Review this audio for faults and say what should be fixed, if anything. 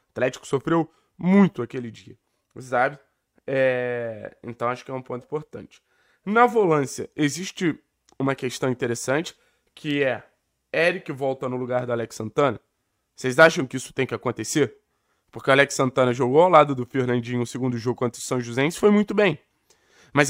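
Nothing in this audio needs fixing. No faults can be heard anywhere in the recording, so no changes are called for.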